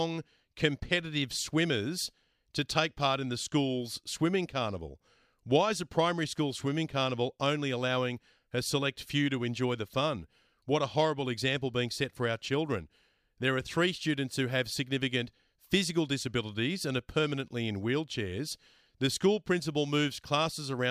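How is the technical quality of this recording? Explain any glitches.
No glitches to report: the speech recording runs without any audible technical fault.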